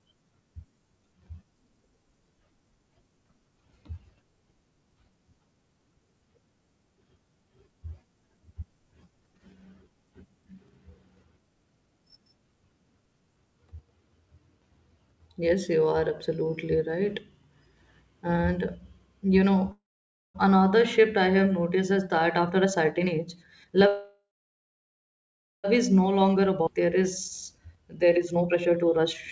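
Right after "you know", at 19.72 to 20.36 s, there's a call audio freeze: the sound smears into a fading buzz, then mostly silence, likely packets stalling and the jitter buffer running dry, before "another shift I have" picks up with nothing lost. From 21.76 to 23.84 s a jitter buffer speed-up kicks in at about 120% speed, same pitch, with roughly 0.4 s of pitch periods trimmed out, so it sounds rushed. A longer freeze runs 23.87 to 25.66 s, again a fading tail into about 1.4 s of quiet, likely the same buffer underrun, and the audio resumes at "is no". Just after that, 26.22 to 27.05 s speeds up a bit to 108%, and at 26.66 to 26.69 s there's a skip ahead where about a second of audio is simply gone and the two sides are butted together. Finally, 27.51 to 29.05 s is sped up to 130%, with about half a second shaved off. All of this sits on a wideband call path with nothing above 8 kHz, which fits G.722.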